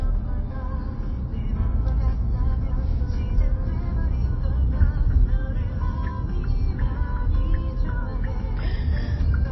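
From start to finish the audio carries plainly audible damage of the kind MP3 compression leaves. Nothing is present above about 5.8 kHz, so the top end stops at a hard shelf and sounds dull. Weak spectral detail flickers in and out from frame to frame, giving a watery, swirling texture, and sharp onsets come out smeared rather than crisp. This is likely an MP3 encode starved of bits, which fits a low bitrate around 24 kbps.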